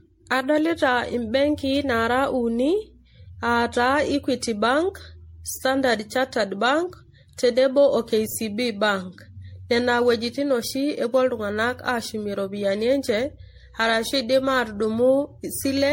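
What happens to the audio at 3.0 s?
Generation loss is present at 3.0 s, as it is throughout the speech. The sound is swirly, smeared and hollow, with blurred attacks and nothing above 16.5 kHz. This is likely from around ten successive MP3 encodes, each requantising on a shifted frame grid, consistent with a 64 kbit/s rate.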